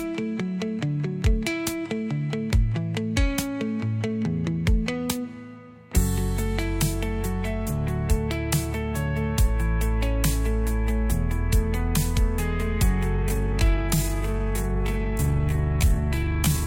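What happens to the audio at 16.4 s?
At 16.4 s you're inside a time-stretched section that kicks in at about 13.12 s and runs right to the end at 16.66 s. The pace drops abruptly to roughly 0.68 times normal speed while the pitch stays put, so it drags. It's likely software stretching that stretch of audio to fill a length, padding it out by repeating short slices so the pitch doesn't sag.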